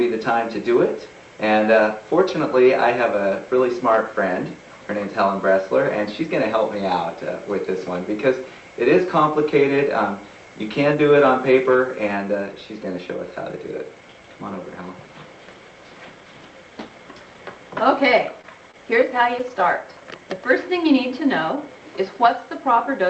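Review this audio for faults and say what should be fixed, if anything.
Lost packets rebuilt from error correction occur at 18.09–18.11 s, 18.17–18.19 s, 19.39–19.41 s and 19.59–19.61 s, each a single 20 ms frame. Each packet went missing, but the next one carried a low-bitrate Opus copy, which the decoder played in its place. There is no gap, just a brief rougher, noisier patch. On a spectrogram each shows as a thin vertical strip of grainier, less defined energy below the 8 kHz ceiling of the call path. In the waveform nothing drops out. Keeping in-band FEC enabled, and raising its redundancy when loss is detected, prevents these from becoming audible holes.

Short concealed packet losses occur at 18.41–18.45 s and 18.71–18.75 s. In each, 20 ms of audio arrived too late to be decoded, and the receiver covered about 18–19 ms of it by extending the preceding sound before blending back into the real signal. 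The result is a quick smear or wobble. In the waveform this appears as a short stretch of repeated or too-smooth cycles with a slightly uneven join. On a spectrogram the harmonics look frozen, or the energy becomes diffuse noise, followed by a faint seam. A deeper jitter buffer, or better network stability during this stretch, would let those packets arrive in time.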